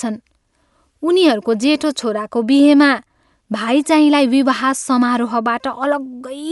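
Speech passes for its whole length through what is likely Dolby Digital compression run at a starved bitrate. The encoder has narrowed the band so that nothing remains above 11.4 kHz, and many frequency lines get no real detail, so the decoder fills them with noise. The damage is plainly audible: the speech sounds dull and muffled, with a rough, fluttering grain around its tonal parts, which fits a rate of about 64 kbps.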